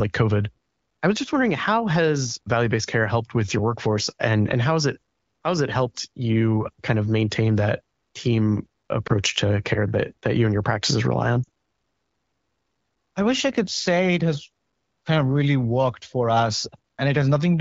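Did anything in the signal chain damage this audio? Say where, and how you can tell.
Yes. Lost AMR speech frames on the radio link cause dips at 9.07 to 9.12 s, after "of maintain that team", and at 11.44 s. The decoder fills them with fading repeats.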